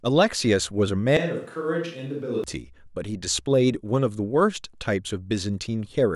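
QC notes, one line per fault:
1.17 to 2.44 s, switch to a distant microphone: the speech abruptly goes roomy and hollow, thins out in the low end, drops about 10 dB, and the room noise comes up to roughly 35 dB under the speech, then snaps back just as suddenly. The close mic's signal likely dropped out and a far-off pickup filled the gap, so we're hearing more room reflections and ambience and less direct sound.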